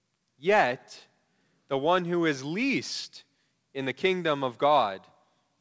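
No technical faults present.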